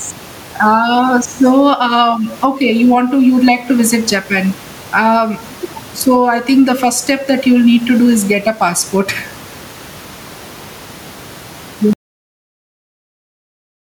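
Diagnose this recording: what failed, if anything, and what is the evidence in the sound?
Gain pumping throughout, in call processing: the gain swings around 10 dB, so loud and soft speech end up closer in level and the sound is squashed, likely excess gain driving a fast limiter.

Cut-off end at 11.93 s, at the driver or buffer stage: speech stops mid-sound into digital silence with no decay, because the final buffers were never written.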